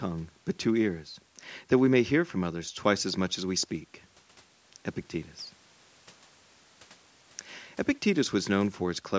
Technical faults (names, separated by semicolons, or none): none